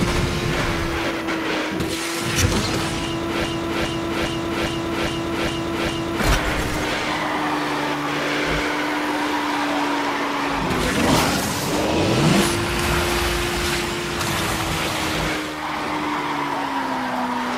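From 3.44 s to 6.20 s, a broken-record loop repeats one 0.41 s fragment seven times. Playback likely stalled. The audio for that span is lost.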